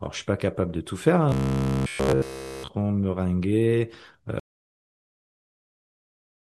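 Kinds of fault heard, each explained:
Robotic sound from repeated short buffers: From 1.29 to 2.68 s the speech becomes a rigid metallic buzz at 66.8 Hz, likely from audio arriving too seldom and about 15 ms chunks being replayed throughout. A spectrogram shows evenly spaced harmonic lines; the waveform shows identical repeating cycles.
Audio dropout to silence: At 4.40 s the sound cuts out abruptly and stays fully silent to the end, likely because the input was lost while zeros kept being written. The waveform is a dead flat line, and the spectrogram is blank, with no residual noise floor.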